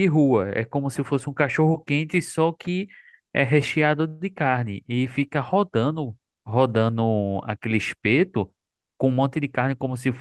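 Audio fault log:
4.07–4.23 s, call audio freeze: The speech stops moving forward for about 0.13 s, and the receiver fills that time by continuing the last sound as a brief fading buzz. Nothing is lost. When the audio returns it picks up exactly where it left off, so the gap is inserted rather than cut, and everything after it sits 128 ms later. The likely cause is packets held up in transit, leaving the jitter buffer empty.
9.05–10.09 s, jitter buffer speed-up: The speech runs at about 109% of normal speed over roughly a second, yet its pitch stays the same. The delivery sounds hurried. The receiver is trimming tiny slices, each one or a few pitch periods long, again and again to shed surplus buffered audio. Around a tenth of a second is removed in total, which brings the delay back down toward its target.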